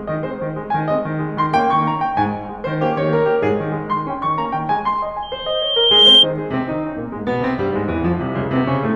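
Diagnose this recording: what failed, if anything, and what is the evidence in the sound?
Playback stage: loudspeaker feedback squeal from 5.22 to 6.26 s. A 3.2 kHz tone builds over about a second, ending roughly 10 dB above the music. Loop gain exceeded one.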